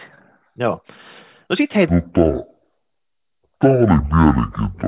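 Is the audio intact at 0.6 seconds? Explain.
Yes, at 0.6 seconds the speech plays through cleanly, with no dropout, click, distortion or other fault to be heard there.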